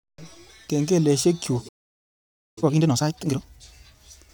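At 1.68 s the player most likely ran out of buffered data, a playback stall: the speech cuts off mid-flow and silence holds for about 0.88 s, until 2.58 s. From 2.58 to 3.46 s, time-compressed catch-up drains the backlog by splicing out short pieces, so the speech runs at twice normal speed with unchanged pitch.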